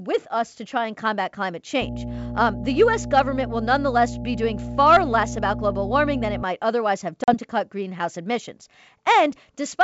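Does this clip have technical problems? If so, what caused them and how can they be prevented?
Yes. Mains hum runs from 1.81 to 6.43 s: a steady 60 Hz tone with low harmonics, fairly strong and not far below the speech, coupled in from a ground loop or nearby transformer. Breaking the ground loop, using balanced cabling and moving the gear away from power transformers would prevent it.

Packet loss on an ADPCM call hits between 7.24 and 7.35 s. About 40 ms, a couple of packets, drops out as a hard-edged hole. The decoder's adaptive predictor and step size then lose step with the sender's, so the speech returns slightly distorted before settling. The band-split G.722 coding itself holds up cleanly around it. A more reliable network path, or packet loss concealment that keeps the decoder state in step, would prevent it.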